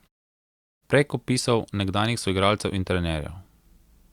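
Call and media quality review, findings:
Nothing to flag on this speech clip; no faults heard.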